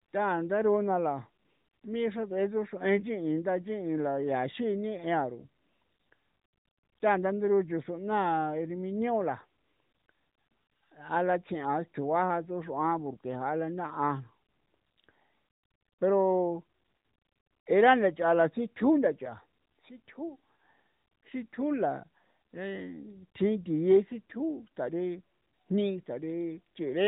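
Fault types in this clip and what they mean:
Nothing stood out as a fault on listening to this speech clip.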